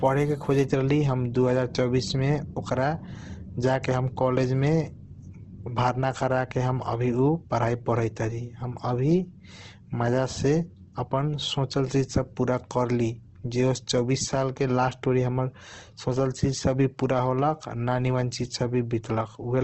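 Speech, with Opus compression throughout: grainy, rough texture and nothing above 12 kHz, likely a low bitrate near 16 kbps, noisy rather than MP3's swirling holes.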